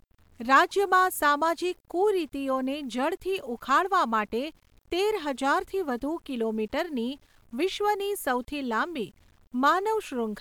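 Throughout the speech, a grainy distortion tracks the signal at around 40 dB below it. The likely cause is low bit depth without dither, with rounding that fits a 9-bit signal. Zoomed in, the waveform shows staircase steps, and a spectrogram shows broadband grain under the speech.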